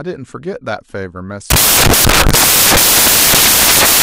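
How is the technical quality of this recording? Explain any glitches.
Poor: from 1.50 s to the end, the speech turns into loud, harsh broadband noise, close to white on the louder sounds. These are samples built from the wrong bytes, where a reader misassembles each sample so the fast-changing low bits become its dominant part.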